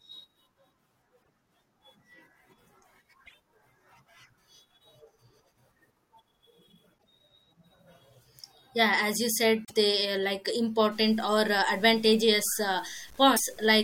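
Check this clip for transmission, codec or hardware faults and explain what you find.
Two faults are present: repeated bursts of damaged compressed data and, near the end, coarse undithered quantisation.

Damaged data in a compressed stream occurs at 1.19–1.29 s, 3.25–3.34 s, 6.97–7.06 s, 9.64–9.71 s and 13.33–13.40 s. Corrupted frames make the decoder lose sync and hunt for the next valid header, so each spot is a brief chirp, squawk, click or short hole.

Low bit depth without dither runs from 10.92 s to the end. The likely cause is samples truncated to about 8 bits with no dither, leaving error tied to the signal at roughly 30 dB below it. The speech turns grainy and gritty, worst in quiet stretches.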